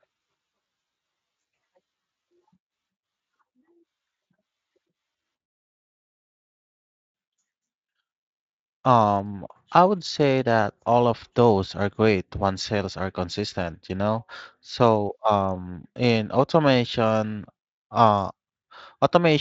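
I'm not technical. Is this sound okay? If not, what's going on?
Yes, I don't hear any problems with this speech recording. It was sent through the Speex speech codec, which has lightly softened the sound and removed the highest frequencies above about 7.6 kHz, so it has the slightly muffled quality of an internet call.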